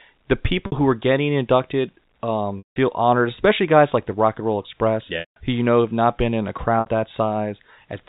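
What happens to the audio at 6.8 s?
Right after "not been in a", a brief held, buzzy tone fades out from 6.8 to 6.86 s: packet loss with pitch repetition bridging a 60 ms gap.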